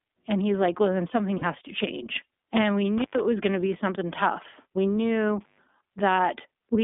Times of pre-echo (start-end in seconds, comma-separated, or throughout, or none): none